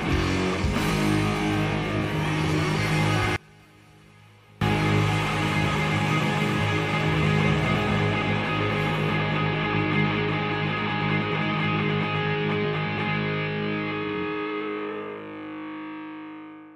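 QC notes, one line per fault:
3.36–4.61 s, one channel inverted: for about 1.25 s the sound collapses when folded to mono, dropping by about 29 dB to a faint remnant with the centred content gone. The likely cause is one stereo channel flipped in polarity, so the shared material cancels.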